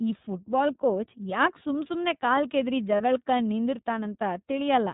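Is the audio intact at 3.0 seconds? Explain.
No. From 2.96 to 3.01 s there is a brief held, slightly buzzy vowel-like sound where the speech should continue. These are lost iLBC frames: about 30 ms of audio, consistent with a single dropped packet, went missing, and the decoder filled the gap by repeating the last pitch cycle blended with noise. Because each frame decodes independently, the speech recovers immediately afterward. Around this moment the speech also has the band-limited, a little rough and synthetic character of the iLBC codec. Nothing above 4 kHz gets through, and the plainly audible coding damage fits the codec's 30 ms mode at roughly 13 kbps.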